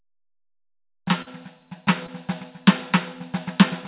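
At 1.22 to 1.28 s and 2.06 to 2.10 s, short concealed packet loss smears the music briefly. Missing audio was filled by extending the preceding sound. The narrowband call path removes everything above 4 kHz.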